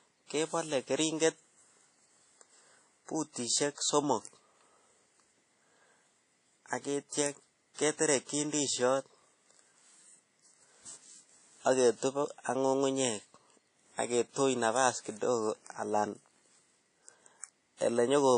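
Throughout the speech, everything above 10 kHz is missing and a washy, ringing hiss swells with the signal, likely WMA compression at a low bitrate around 32 kbps. Unlike plain band-limiting, the noise breathes with the signal. Pre-echo appears from 7.74 to 7.78 s (44 ms) and from 17.77 to 17.81 s (39 ms). A brief hiss leads each attack because block-wide quantisation noise leaks backward, distinct from a click or dropout.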